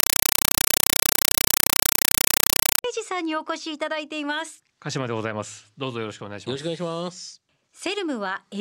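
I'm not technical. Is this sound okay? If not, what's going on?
No. From the start until about 2.84 s, chattering static replaces the speech. This is a compressed stream played as audio. The sound points to a Dolby Digital stream that went out over a digital link and was never decoded. The player treated the packed data as plain sound. Each data packet comes out as a burst of noise about 5.3 ms long, followed by silence. This repeats about 31 times a second, which makes the chatter.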